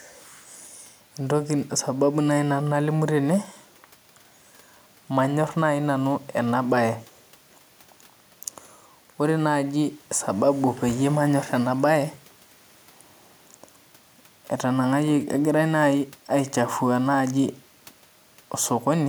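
No technical faults can be heard anywhere in the recording, so there is nothing to place in time order.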